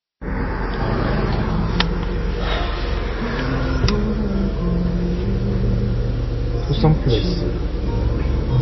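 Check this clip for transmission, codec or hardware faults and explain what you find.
Two faults are audible: plainly audible codec damage across the whole clip, and coarse quantisation from 1.21 s to the end.

MP3 compression runs throughout. Nothing survives above 5.8 kHz, and the remaining band has a watery, swirling quality, which fits a very low bitrate around 24 kbps. The likely cause is an encoder short of bits. It cuts the treble at a fixed frequency and drops weak frequency lines that then flicker between frames. On a spectrogram this shows as a hard ceiling at 5.8 kHz, with patchy, blocky holes beneath it.

Low bit depth without dither begins at 1.21 s and continues to the end. A grainy, rough distortion rides on the audio and tracks its level, sitting roughly 25 dB below the signal. This points to about 7-bit resolution with plain rounding. Because the rounding error follows the waveform, the grit changes with the sound. 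On a waveform, zooming in shows visible stair-steps. A spectrogram shows a raised, signal-shaped noise floor from 1.21 s onward.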